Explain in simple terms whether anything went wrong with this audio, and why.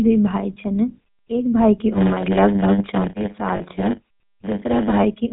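A couple of things went wrong. The whole clip has the sound of the GSM full-rate codec, the old mobile-phone speech coder. It rebuilds the voice from a rough model of the throat and mouth, fed by a sparse train of pulses, so the speech comes out buzzy and gravelly. Anything above 4 kHz is gone, which makes it sound dull and boxy. The damage is plainly audible from start to finish.

Then, from about 3.56 to 3.61 s, there's a brief glitch from lost GSM frames. For about 40 ms, which fits two frames, the decoder had nothing usable. It kept reusing the settings of the last good frame. That's why you hear a short, rough, metallic ring there instead of clean speech. The gap is short, so it never fades fully to silence.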